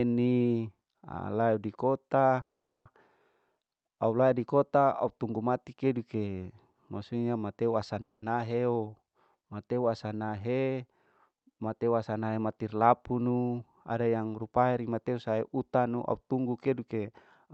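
At 2.41 s the speech stops and sits in a gap of roughly 440 ms, ending at 2.88 s. There's only a brief tail before it drops to silence for about 430 ms of that. Then it picks up exactly where it left off. That's a call audio freeze, likely from packets stalling in transit until the jitter buffer ran dry. Nothing gets lost; everything after simply lands later. The same thing happens at 8.01 s, a shorter 210 ms hold (about 190 ms of it silent) that ends at 8.25 s.

From 13.11 to 14.63 s you get the jitter buffer speed-up. The receiver, holding more audio than it wanted, trimmed tiny pitch-period slices over and over, about a fifth of a second in total. So that stretch plays at 111% speed with the pitch unchanged, and it comes across rushed. The Opus call path underneath tops out at 8 kHz, and its level of coding noise fits a bitrate around 64 kbps.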